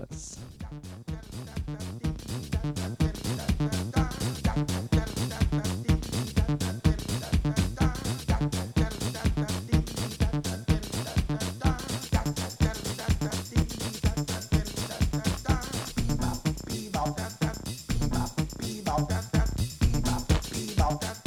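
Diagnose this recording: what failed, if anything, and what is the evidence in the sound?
The driver and buffer stage failed: the processor fell behind and missed a run of buffer deadlines, causing processor overload crackle. From 12.94 to 13.62 s, roughly 15 very short buffers were skipped, each about 0.7 ms. The resulting hard-edged gaps are heard as gritty crackle.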